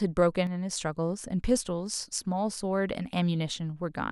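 Between 0.47 and 0.71 s, one stereo channel likely drops out, so the mono speech suddenly falls by about 6 dB before returning to full level.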